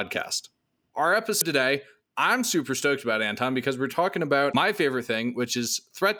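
At 1.37 to 1.42 s and again at 4.51 to 4.55 s, damaged data in a compressed stream breaks into the speech as a short glitch. Corrupted bytes make the decoder misread those frames, lose sync and hunt for the next valid frame header.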